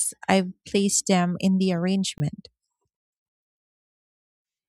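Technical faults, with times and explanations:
2.18–2.20 s, block of digital silence: just after "placed them in the", 20 ms of audio drops abruptly to silence, leaving a short hole with hard edges.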